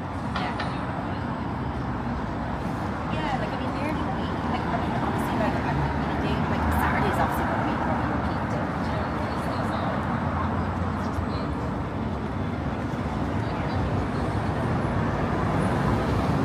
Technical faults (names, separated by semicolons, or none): none